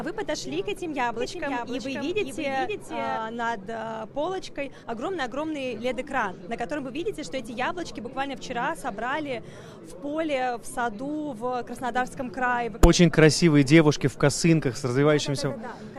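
From 1.14 to 3.18 s, a doubled audio track: a full-band copy trails by about half a second, a few dB quieter, likely from a second capture path.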